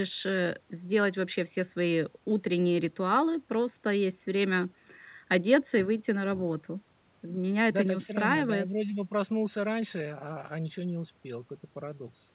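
Nothing stood out on listening to this speech recording, which has the narrow, telephone-like band of a call path with nothing above 4 kHz.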